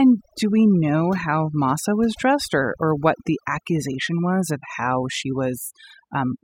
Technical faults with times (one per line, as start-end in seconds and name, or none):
0.00-6.44 overdone noise removal